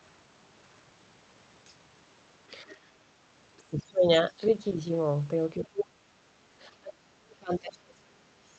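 At 1.65 to 1.74 s, 3.58 to 3.63 s and 7.72 to 7.78 s, brief scraps of the other side's voice leak through, very faint. An echo canceller likely left loudspeaker sound in the microphone.

Speech is suppressed in double talk at 2.63 to 2.75 s, 3.71 to 4.05 s, 5.63 to 6.17 s and 6.79 to 8.31 s. The voice dips by about 10, 25, 30 and 40 dB. The last dip lasts around a second and a half. This is likely the canceller turning everything down while both sides spoke.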